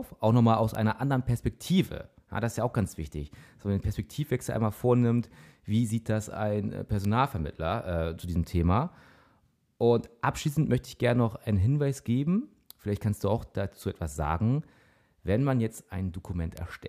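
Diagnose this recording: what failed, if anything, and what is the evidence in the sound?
Four isolated ticks at 0.75 s (just after "nochmal aus"), 7.05, 11.93 and 16.57 s, peaking around -13 to -31 dBFS. These are bit error spikes: a flipped bit in storage or on a digital link throws a sample or a few off, producing broadband clicks unrelated to the speech.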